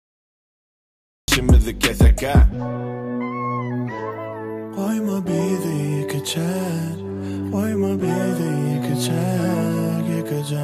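From 0 to 1.28 s there is digital silence, then sound begins abruptly mid-event with no attack: a cut-off start, where recording began late.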